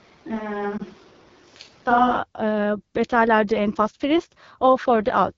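From the start of the clip until 2.16 s, the speech sounds roomy and hollow, with thinner bass. This is most likely a switch to a distant microphone, one set further from the talker than the close one. The level barely changes, but background noise sits roughly 30 dB below the speech. A spectrogram shows a raised noise floor between syllables and smeared, reverberant tails. At 2.16 s the sound changes abruptly and the room colour drops away.

Between 0.77 and 0.81 s, lost AMR speech frames cause a brief dip or warble as the decoder covers a single missing frame of 20 ms. It repeats the last good pitch and vocal tract settings at falling gain. The waveform shows a short notch where the envelope sags. On a spectrogram the harmonics go briefly flat and smeared before normal speech returns a little weak or rough.

Across the whole clip, the AMR wideband (HD Voice) codec is plainly audible. Its raspy, rough texture points to one of the lowest modes, which fits 8.85 kbit/s. 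The speech is modelled from pulses through a vocal tract filter, and at this rate there are too few bits to render it cleanly. On a spectrogram, energy above 6.4 kHz looks like diffuse noise rather than harmonic structure and ends near 7 kHz. The lower harmonics look grainy and broken.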